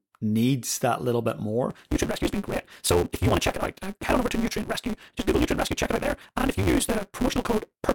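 From 1.69 s to the end, the speech has a block size mismatch (truncated). One stage writes longer blocks than the next stage reads, so the tail of every block is discarded. The regular cuts produce a buzz at 188 Hz. That rate fits a 256-sample read size. The speech also runs 1.88 times faster than normal. Its timbre stays the same, so it sounds hurried.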